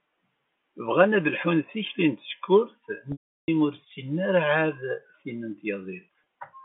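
From 3.12 to 3.48 s, after "lḥun tikli n tsekkurt", packet loss with pitch repetition bridges 360 ms. The last pitch period loops as flat harmonic stripes, fades to a blank gap, then cross-fades into "ur ssinen ara ɛad". At 6.16 to 6.25 s, 50 ms of scattered short losses give brief buzzy holds.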